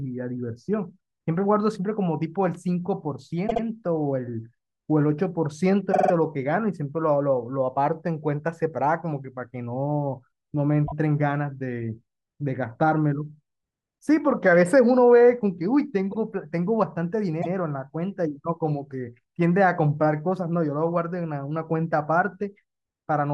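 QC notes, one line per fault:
3.47–3.61 s, repeated frames: a 72 ms block plays twice more, adding 144 ms. The decoder receives the same compressed frames again, giving a stutter, which fits 24 ms frames.
5.92–6.11 s, repeated frames: a 48 ms block plays four extra times, adding 192 ms.
10.86–10.93 s, repeated frames: a 24 ms block plays twice more, adding 48 ms.
16.12–16.17 s, repeated frames: a 48 ms block repeats once, adding 48 ms.
17.41–17.51 s, repeated frames: a 96 ms block repeats once, adding 96 ms.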